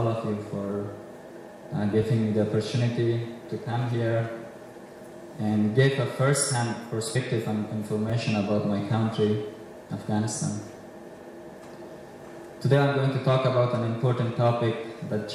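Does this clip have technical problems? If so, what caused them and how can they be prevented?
Yes. There are two kinds of fault.

Repeated buffer faults occur at 2.03 s, 8.10 s and 10.79 s. Each time, fresh audio failed to reach the output device before it was needed, so the device played its last block a second time. The repeated block is about 10.7 ms long, which fits a 512-sample buffer. Because the block is so short, each repeat is heard as a click or a very brief buzz rather than a clear stutter, with a hard edge where the copy joins the following audio. No audio is lost. Prevention: increase the playback buffer size or give the audio thread higher scheduling priority so that new data always arrives in time.

Compressed frames skipped occurs at 7.15 s. About three frames of the encoded stream were not decoded, either because they were missing from the file or because the decoder rejected them as corrupt. 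The frame length is 21.3 ms, so the audio jumps forward by roughly 70 ms. Prevention: check the integrity of the file or stream during transfer and storage, and re-fetch or repair damaged segments before they are decoded.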